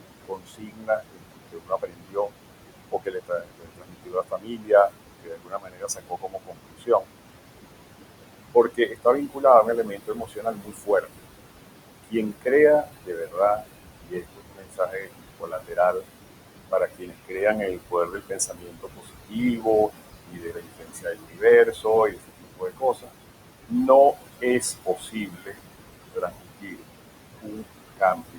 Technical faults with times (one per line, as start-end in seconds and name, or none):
0.00-28.39 noise suppressor artifacts
0.25-2.32 speech cut by the noise suppressor
2.92-7.12 speech cut by the noise suppressor
8.54-11.22 speech cut by the noise suppressor
12.04-16.05 speech cut by the noise suppressor
16.71-23.13 speech cut by the noise suppressor
23.68-26.84 speech cut by the noise suppressor
27.41-28.39 speech cut by the noise suppressor